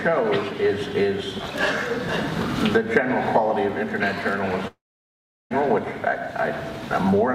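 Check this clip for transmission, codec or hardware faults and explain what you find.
One transmission fault is present. From 4.67 to 5.52 s, a long network dropout likely lost 0.84 s of audio: a brief fading continuation, then 0.74 s of silence, then sound resumes without the missing part.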